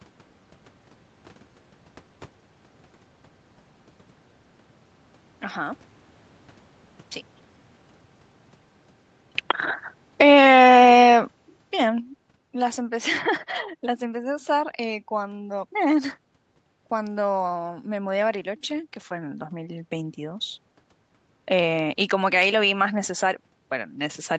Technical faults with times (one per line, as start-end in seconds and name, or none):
10.05-12.79 automatic gain falling
12.75-20.69 automatic gain rising